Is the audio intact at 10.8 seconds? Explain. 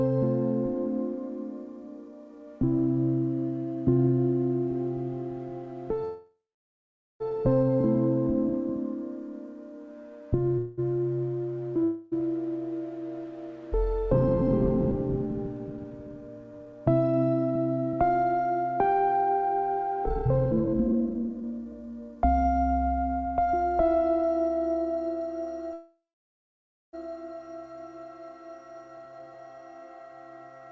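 No. From 10.58 to 10.80 s there is a call audio freeze: the last sound is drawn out as a fading buzz or hiss for roughly 0.19 s, likely because packets stalled in transit and the jitter buffer ran dry. What separates it from packet loss is that nothing is skipped. When the audio resumes it picks up exactly where it stopped, so the stream now runs about 194 ms later than before. The G.722 call path keeps nothing above 8 kHz throughout.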